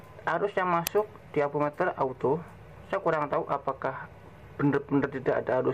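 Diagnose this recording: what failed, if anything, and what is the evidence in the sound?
Driver/buffer stage: an uninitialised buffer plays at 0.87 s, a sharp 2.67 ms burst of digital junk. Leftover memory was played as samples, which fits a 128-sample buffer.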